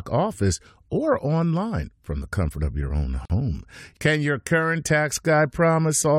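At 3.25 s, just after "comfort of your own", a gap at a join of encoded pieces cuts the speech for about 46 ms, to 3.30 s. Two separately encoded segments were spliced with their encoder delay and end padding left in. The waveform drops to a flat line, and the spectrogram shows a blank vertical strip with slightly blurred edges.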